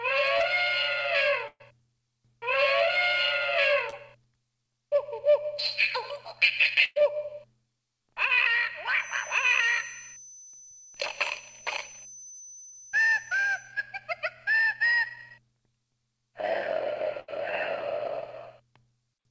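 At 0.38 s there is short concealed packet loss: about 20 ms of audio failed to reach the decoder in time, and the receiver covered the hole by extending the preceding sound for roughly 17 ms before crossfading back into real signal. It is heard as a brief smear or wobble. The same fault recurs at 3.90 s and at 12.70 s, each time with about 20 ms missing and a bridge of around 23 to 24 ms.

From 1.48 to 1.62 s comes a burst of packet loss. Around 120 ms of audio is gone, and concealment stretches the last sound across the gap while fading it, reaching about 40 ms of silence before playback resumes further on. A second burst runs from 6.84 to 6.98 s, again with 120 ms lost but fading to only about 10 ms of silence. A shorter one at 17.20 to 17.30 s drops about 80 ms.

From 8.95 to 13.77 s a thin whistle at 6.1 kHz sits about 20 dB below the main sound, swelling and fading slowly in level. 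The likely cause is a feedback whistle, where the loudspeaker-to-microphone loop is held just at the edge of oscillation so that one frequency rings on without building up. It stays inside the call path's 8 kHz bandwidth, which fits G.722 coding and leaves no content above that limit.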